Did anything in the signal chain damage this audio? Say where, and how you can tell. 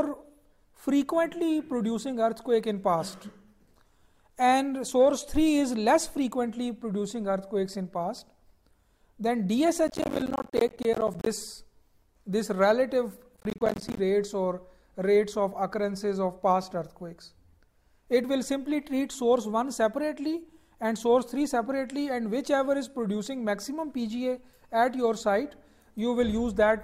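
Yes. There are two bursts of processor overload crackle, from 9.88 to 11.26 s and from 13.33 to 13.98 s. The damage comes from the driver or buffer stage. The processor repeatedly failed to fill its audio buffers in time. Each missed buffer became a tiny silent gap with hard edges. Dozens of them in a row produce the gritty tearing. The spacing of the clicks fits buffers of around 10 ms. The sound clears once the load passes.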